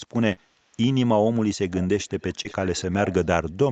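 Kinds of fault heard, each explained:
Short concealed packet loss: brief smears near 0.32 and 2.43 s, where about 40 ms and then 20 ms of audio never arrived and the decoder stretched the preceding sound over the gap.
Echo leak: a faint repeat trailing the speech by about 390 ms, roughly 20 dB down, from 1.81 to 2.93 s, likely loudspeaker output the far side's echo canceller missed.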